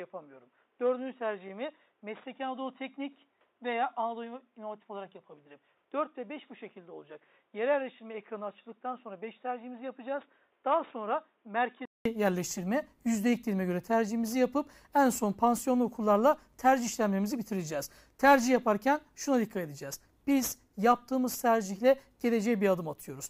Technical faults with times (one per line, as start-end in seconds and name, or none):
0.00-12.05 input switched to a poorer device